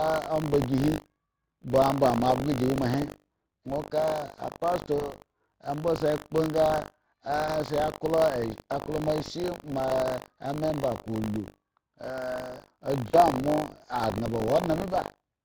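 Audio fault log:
Throughout, Speex codec: the speech has a plainly audible coarse, hoarse grain, which fits a setting around 20.6 kbps. At that rate the CELP coder is short of bits for the excitation, so voicing comes out rough and noisy rather than clean. Any high band above 8 kHz sounds like a shaped hiss laid in, not real detail. It's consistent for the whole clip, so it's the codec itself, not a passing glitch.
Throughout, buffer tearing: there's a steady 50 Hz buzzy rattle riding on the speech, and it drops away in the gaps. The writing side and the reading side of the ring buffer have drifted and now cross every period. A small slice of each buffer, roughly a twentieth, is stale audio from about 70 ms back, with hard joins either side. Because that repeats at the buffer rate, it comes across as a continuous 50 Hz rasp.
4.99–5.14, 7.47–7.51, 9.89–9.92, VoIP packet loss concealed by the speech codec: at each of these three moments a single 20 ms packet went missing. 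The decoder covered it by stretching the last pitch and filter into a short buzzy smear that fades. The first one trails for about 150 ms before the speech firms up again, because each concealed frame feeds the next. The other two recover faster.
13.07–13.17, VoIP packet loss concealed by the speech codec: this one is bigger, three packets in a row, so about 60 ms gone. The extrapolated tone holds longer and sags audibly as the gain is stepped down frame by frame. Then the speech comes back a bit weak and smeared for a short while, since the decoder is rebuilding from its own guesses.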